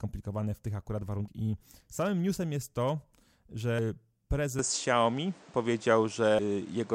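At 1.28 s and 3.79 s there are brief glitches from damaged data in a compressed stream: the decoder hits corrupted frames, loses sync and skips ahead to the next valid header, leaving a short blip. From 4.59 s the sound turns duller, with nothing above 9.5 kHz, a level shift of roughly 5 dB and a new noise floor about 30 dB down, with no gap at the change. This is likely the input switched to a poorer device. A third corruption glitch follows at 6.39 s.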